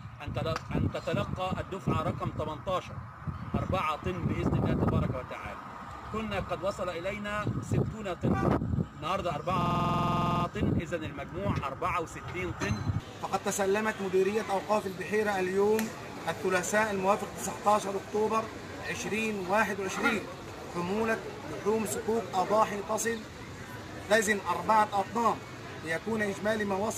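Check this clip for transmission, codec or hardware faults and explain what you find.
One fault is audible, a system hang loop from 9.61 to 10.45 s. The system froze while the sound hardware kept replaying its ring buffer, so one 46.4 ms slice repeats exactly, about eighteen times, which fits a 2048-sample buffer. At 21.5 Hz that sounds like a rapid, machine-gun-like stutter. Unlike a dropout or underrun, there are no silent gaps and essentially nothing is skipped. Each repeat is identical and the rate stays rigidly steady.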